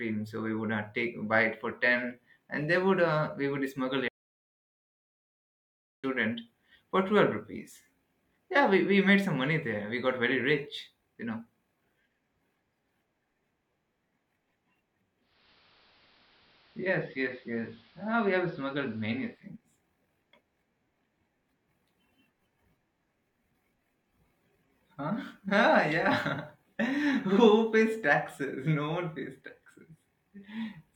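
At 4.08 s the input was likely lost, from a disconnected device, failed link or stray mute, while recording carried on writing silence. This audio dropout to silence cuts the speech off abruptly for about 1.95 s, leaving dead digital silence with no room tone until it resumes at 6.04 s.

From 15.2 s to 19.52 s the receiver lost its digital signal and performed digital radio blending to analogue, crossfading over about 305 ms to the AM broadcast and back. The speech drops about 1 dB in level and gains faint hiss roughly 30 dB down.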